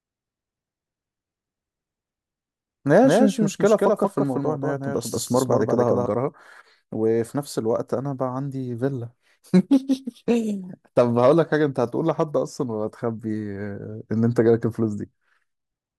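From the start of the clip until 6.06 s, the speech carries a doubled audio track: a second full-band copy trails the original by roughly a fifth of a second, at about 5 dB lower. The copy adds no reverberant tail or room colouring, so it reads as a flat, distinct repeat rather than an echo. It stops abruptly at 6.06 s. The likely cause is the same signal being captured again through a slower path.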